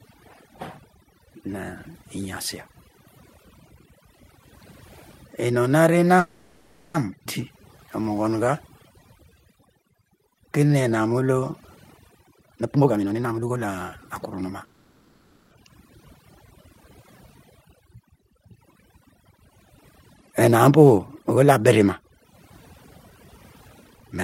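Speech recording with overdone noise removal throughout: a noise reducer set far too aggressively has pulled every frequency band near its noise estimate down to almost nothing. The background sits in near silence broken by twinkling specks. On a spectrogram the gaps between phrases look almost black, dotted with isolated bright pixels, and the weaker harmonics and breath noise inside the speech are eaten away in patches, leaving a ragged, moth-eaten texture. From 6.19 to 6.97 s the sound stops moving forward and the last sound is drawn out as a fading buzz or hiss for about 750 ms. The same happens from 14.64 to 15.54 s, this time for about 870 ms. This is a call audio freeze, likely from packets held up in transit until the jitter buffer ran empty. Nothing is lost, because playback resumes where it stopped, so each freeze simply inserts a gap. On a spectrogram the final spectrum carries on as flat, decaying horizontal streaks with no new onsets. 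A skip ahead follows at 7.24 to 7.28 s, where roughly half a second of audio is dropped and the two sides are spliced almost directly. This appears as a hard vertical seam in the spectrogram and a sudden jump in the waveform envelope. From 7.51 to 11.51 s a jitter buffer slow-down plays the speech at 90% speed with unchanged pitch, adding about 0.4 s. The receiver repeated single pitch periods to rebuild its reserve, so sounds are drawn out, and the waveform shows near-identical cycles stacked in runs. Jitter buffer speed-up then trims the delay by cutting out short pitch-period pieces. From 12.42 to 14.52 s it runs at 127%, removing about half a second, which sounds clearly hurried. From 17.81 to 21.80 s it runs at 104% and removes about 150 ms. From 23.1 s to the end it runs at 115% and removes about 200 ms. Harmonic spacing stays the same in all three stretches, but syllables and formant movements are squeezed closer together along the time axis.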